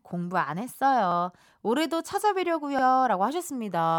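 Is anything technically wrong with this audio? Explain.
Yes. There are two repeated buffer faults in this speech, at 1.12 s and again at 2.79 s. Each time, fresh audio failed to arrive and the device replayed its previous block of about 46 ms, which fits a 2048-sample buffer, one extra time. The result is a brief stutter with a hard join at each seam. No audio seems to go missing. On a waveform the same 46 ms shape appears twice in a row. A spectrogram shows a short duplicated patch bounded by thin vertical lines at the joins.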